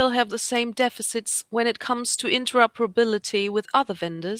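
No technical faults can be heard anywhere in the recording, with the signal remaining steady and intact from its opening to its close.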